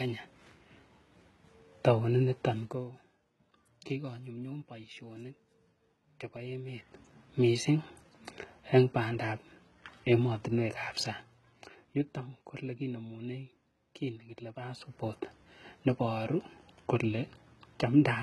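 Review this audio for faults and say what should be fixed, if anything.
Throughout the speech, s sounds turn gritty and lispy and the treble has a metallic sheen. The sound points to heavy HE-AAC compression, likely at a bitrate around 16 kbps, with the treble rebuilt from copied lower bands whose harmonics misalign above the crossover. On a spectrogram, that region shows smeared, repeated blocks rather than clean harmonic lines. To prevent it, encode at a higher bitrate or with a full-band codec.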